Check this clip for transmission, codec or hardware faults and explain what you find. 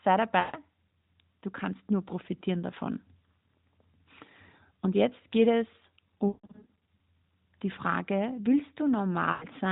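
Three bursts of lost AMR speech frames break up this narrowband speech.

Lost AMR speech frames occur at 0.40–0.57 s, 6.28–6.73 s just after "jetzt geht es", and 9.32–9.46 s. Corrupted frames failed their checks, so the decoder filled the gaps by repeating its last good pitch and vocal-tract settings at falling gain. The first and last gaps, about 140 ms and 100 ms, sound like a smeared, dying stretch of speech. The middle one is scattered over about 600 ms, with a longest run near 160 ms. It warbles, fades toward silence, and returns weak or rough. The AMR narrowband band limit and light coding texture fit the 12.2 kbps mode.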